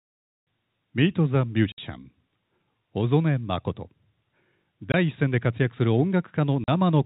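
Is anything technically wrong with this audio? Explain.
Yes. Packet loss filled with silence: packets went missing, and the receiver played silence in their place. This cuts hard-edged holes of 60 ms at 1.72–1.78 s, 20 ms at 4.92–4.94 s, and 40 ms at 6.64–6.68 s, which fits 20 ms packets. The telephone-band G.711 coding underneath is working normally.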